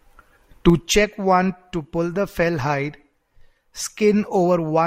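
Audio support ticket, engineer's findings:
Ticking, zipping texture riding on the speech, 0.64–1.08 s, while level drops roughly 10 dB. Zipper noise: gain applied in unsmoothed 3 dB steps, about ten per second, each step a small click. Probable component: gain/fader stage lacking ramping.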